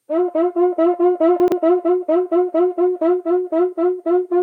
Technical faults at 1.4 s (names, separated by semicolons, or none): chunks out of order